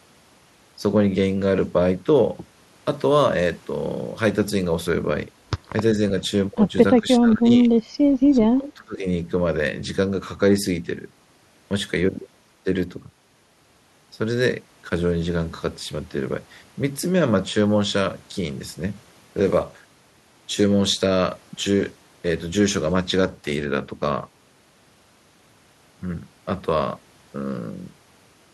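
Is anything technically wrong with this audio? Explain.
Yes. From 7.01 to 7.7 s and 8.33 to 9.05 s, the speech dips and breaks up. This is likely speech suppressed in double talk. The canceller turned down the talker while the far side spoke. The deepest drop is roughly 30 dB.

From 8.64 to 8.73 s, a faint delayed copy of the speech appears, about 20 dB below it. It lags by 388 ms. An echo leak through the far side's canceller is the likely cause.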